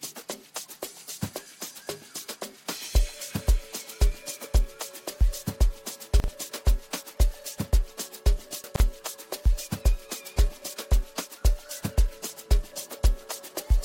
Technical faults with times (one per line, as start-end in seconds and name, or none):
6.20-6.28 chunks out of order
8.64-8.80 chunks out of order